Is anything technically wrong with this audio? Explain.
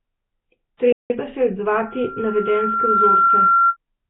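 Yes, three things stand out.

The whole clip has a rough, hissy, underwater quality. That's likely Nellymoser compression: it codes short blocks on a tight bit budget and fills starved bands with noise. The damage is heavy and fits a low rate around 16 kbps.

From 0.92 to 1.10 s the speech cuts out for about 175 ms, then carries on. That's a playback stall: the player likely ran dry of data or got blocked, so the output went silent until it caught up.

From 1.72 to 3.77 s there's a loudspeaker feedback squeal at 1.4 kHz. A mic was picking up its own speaker, and at that frequency the loop gain topped one. The tone builds over a second and a half or so, ending about 5 dB above the speech.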